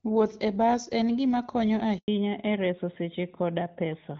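Just after "bas en gima konyo", at 1.98 s, the speech drops out in a handover gap. The call was passed from one network to another, and no speech frames arrived during the switch, so the sound fades within a few tens of milliseconds and stays silent for 100 ms, until 2.08 s. Whatever was said in that window is gone. A packet-loss dropout would typically be patched with smeared or repeated sound. Here there is clean silence, and the sound that follows carries a different tone.

That change of tone is the fallback to narrowband, running from 2.08 s to the end of the clip. Before the switch, the HD Voice path sounds light and clear, which fits AMR wideband at around 12.65 kbit/s. After the switch, nothing remains above 4 kHz. The sibilants lose their crispness and the speech turns duller and rougher, in the way of AMR narrowband at about 12.2 kbit/s. A low-pass filter or a poor microphone would muffle the whole clip. 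This change begins abruptly at the handover and persists from then on.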